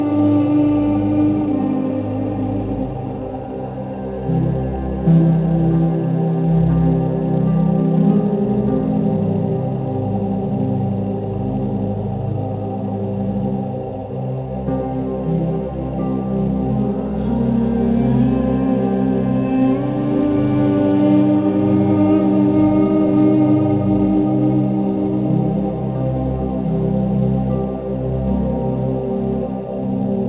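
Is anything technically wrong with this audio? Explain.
No, nothing here is technically wrong; it's simply audio that came over a call line using the G.711 A-law codec at 64 kbps, which is why there's nothing above 4 kHz and it has that familiar narrow, phone-like character.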